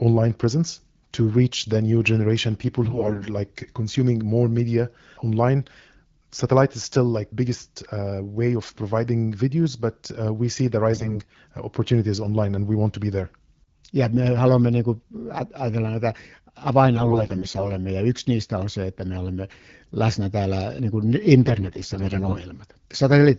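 AMR bit errors hit this speech four times: 2.84 to 3.28 s, 10.92 to 11.40 s (after "we see the", before "uh opportunities online and"), 16.96 to 17.73 s (before "ja yksi niistä on"), and 21.45 to 22.48 s (after "läsnä täällä niin kuin"). Weakly protected bits in the codec frames flipped in transit, yet the frames still passed their check and were decoded. The excitation pulses land wrong, and the fine pitch, gain and spectral values drift. Pitch and loudness roughly hold, but the voice turns hoarse, scratchy and gargly. The first three bursts are harsher, with errors in the teens of percent. The last is milder, nearer a few percent, but runs longest. Between bursts the wideband codec sounds clear, which fits a rate around 12.65 kbit/s.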